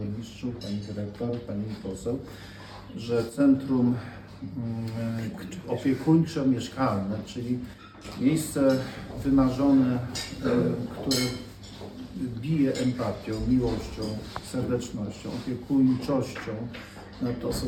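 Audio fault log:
3.29–3.40 s and 7.74–8.05 s, one channel drops out: the level falls abruptly by about 6 dB for roughly 0.1 s, then for about 0.3 s, and recovers just as suddenly each time. The likely cause is one stereo channel briefly going silent. In the mono sum, material shared by both channels is halved, which gives the 6 dB step, and anything carried only by the missing side vanishes for the duration.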